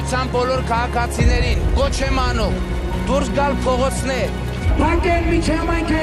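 MP2 compression damage runs through the whole clip, from the first moment to the last. The sound is dull and lacks top end, with a gurgling, granular roughness that stays plainly audible. This is likely MPEG Layer II coding at a rate low enough to starve its 32 sub-bands, which fits roughly 80 kbps: upper bands drop out and flicker back, and the remaining bands are quantised so coarsely that their detail breaks into grit.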